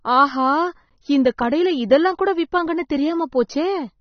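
From start to end, the speech is band-limited, with nothing above 6.3 kHz, and the codec damage is plainly audible: sibilants turn fizzy and smeared, and sustained vowels carry a warble. This is likely AAC compression at a low bitrate, consistent with AAC-LC running somewhere near 27 kbps. At that rate the encoder lowers its cut-off and quantises the remaining frequency lines coarsely, leaving spectral gaps that fluctuate from frame to frame.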